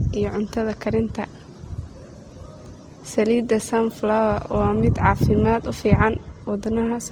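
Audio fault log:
throughout: transcoding between lossy codecs. The speech has two kinds of coding damage at once. The artefacts of each codec are heard together. The likely cause is an MP3 near 50 kbit/s re-encoded to Opus near 24 kbit/s, wasting bits on old artefacts.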